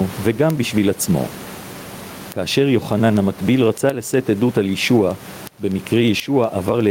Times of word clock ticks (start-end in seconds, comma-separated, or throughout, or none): 0.14-6.90